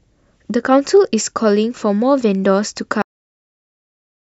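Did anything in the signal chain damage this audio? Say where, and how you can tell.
Yes: the speech stops mid-sound at 3.02 s into flat digital silence with no decay, a cut-off end where the final buffers were never written to storage.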